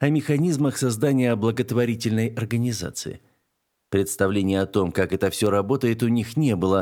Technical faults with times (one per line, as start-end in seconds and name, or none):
5.37-5.46 loose connector crackle